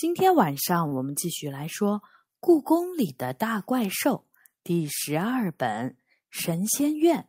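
Speech with two timing faults. At 0.87 to 0.94 s there is a short stall from a late packet. The receiver held the sound for about 41 ms, and nothing was lost. From 6.51 to 6.95 s there is a jitter buffer speed-up. Bits of whole pitch periods were cut, roughly 40 ms in total, so the speech runs about 8% faster at the same pitch.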